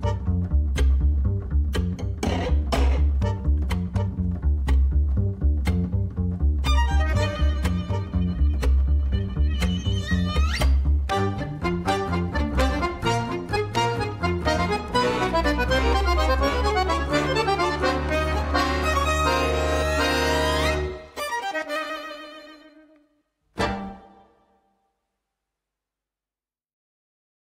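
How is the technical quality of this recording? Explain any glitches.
No glitches are audible anywhere in the recording, so there is nothing to explain.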